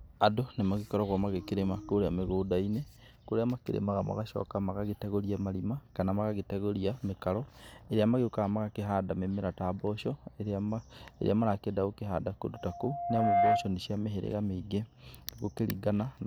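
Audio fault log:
12.55–13.77 s, loudspeaker feedback squeal: the microphone is picking up the loudspeaker it drives, and at 700 Hz the loop gain rises above one, so that frequency recirculates and reinforces itself on each pass. It swells out of the speech over about a second into a steady, piercing tone that ends up roughly 10 dB louder than the speech, then stops at 13.77 s.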